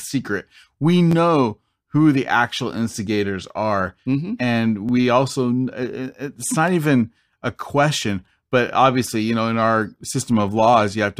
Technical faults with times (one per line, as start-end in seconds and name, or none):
1.11-1.14 repeated buffer
4.89 repeated buffer
6.47-6.50 repeated buffer